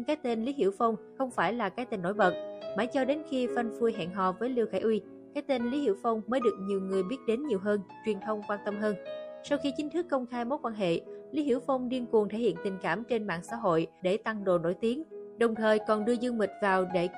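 The audio was likely squeezed through heavy MP3 compression, consistent with roughly 64 kbps, leaving plainly audible watery swirling and smeared attacks throughout.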